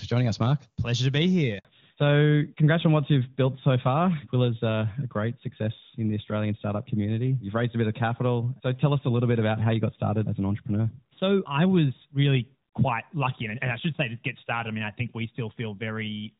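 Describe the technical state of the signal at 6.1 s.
At 6.1 s the speech is in a fallback to narrowband, from 1.65 s to the end. The HD Voice link has dropped to a narrowband codec. Nothing above 4 kHz remains, so the speech sounds duller and rougher.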